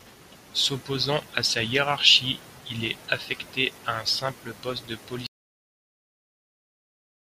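At 5.27 s the speech cuts out abruptly into an audio dropout to silence that runs to the end, about 2.0 s. No room tone remains, only silence, likely from lost input while recording continued. The waveform flatlines and the spectrogram turns completely black.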